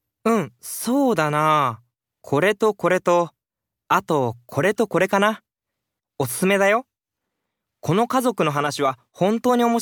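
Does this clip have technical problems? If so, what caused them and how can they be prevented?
No, nothing in this speech recording sounds like a technical problem, so there's nothing to trace back or guard against here.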